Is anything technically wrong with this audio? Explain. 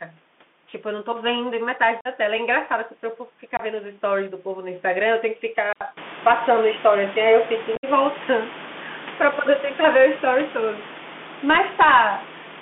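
Yes, there are a few problems.

The whole clip runs through a Bluetooth CVSD headset codec. The band is squeezed to roughly 200 Hz to 3.5 kHz, and the one-bit-per-sample delta coding, at what sounds like 64 kbps, can't keep up with sharp, loud highs. So s sounds come out scratchy, there's audible distortion on bright peaks, and a grainy hiss sits under the speech.

There's unconcealed Bluetooth headset packet loss at 2.01 to 2.07 s (45 ms), at 3.57 to 3.60 s (22.5 ms), and again at 7.76 to 7.85 s. That last one is about 67.5 ms of loss scattered over 75 ms, with the longest run 60 ms, which points to around ten packets going missing. Nothing fills the gaps, so you get hard-edged holes that can click, and the speech comes back a touch quieter.

At 5.73 s the sound cuts out for about 80 ms and then carries on duller and boxier. That's likely an input switched to a poorer device, something like a headset's call mic. 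The level stays about the same, and there's a new noise floor roughly 40 dB under the speech. Separately, the room noise comes up by about 23 dB around 6 s and sits about 16 dB below the speech after that.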